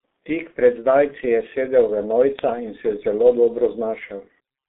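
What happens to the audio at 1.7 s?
At 1.7 s the speech carries the G.723.1 codec damage heard throughout: heavy low-rate coding, which fits roughly 6 kbit/s, strips everything above 3.8 kHz, leaving it muffled and hoarse with smeared consonants.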